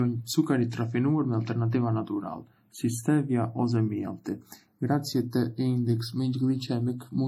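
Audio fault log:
Throughout, channels drifting apart: the two channels run on slightly different clocks, an error of roughly 30 ppm, so the offset between them creeps to a fraction of a millisecond by the end. Summed to mono, comb notches sweep slowly, heard as slow flanging on the speech.
Throughout, transcoding between lossy codecs: the speech carries mixed artefacts from more than one codec heard together, and nothing above 18.2 kHz. This is likely from an MP3 encode at 40 kbit/s later re-encoded as HE-AAC at 40 kbit/s, each stage compounding the previous one's damage.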